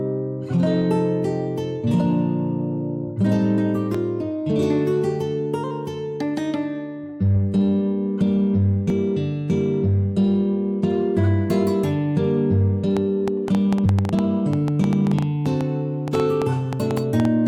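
At 3.94 s and again at 8.90 s there's a skip where audio goes missing between chunks, a tiny jump of about 40 ms with the two sides butted together. They land 5 s apart, which likely points to a recorder dropping a sliver at each chunk boundary.

From 12.97 s to 17.26 s a train of clicks ticks over the sound, around thirty pops at an uneven pace of nearly seven per second, some about 10 dB above the audio. That's likely interference or a faulty connection. Another chunk skip falls at 13.86 s, right inside that stretch.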